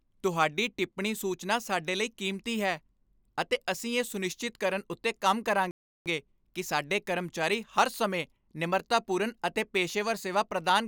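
At 5.71 s, just after "ਸੁਨਿਸ਼ਚਿਤ ਕਰਨ ਉੱਤੇ ਕੰਮ", the speech drops to silence for 0.35 s and resumes at 6.06 s with "ਕਿ ਸਾਡੇ ਕਰਮਚਾਰੀ ਹਰ". This is a playback stall, likely the player running short of buffered data or its output thread being blocked.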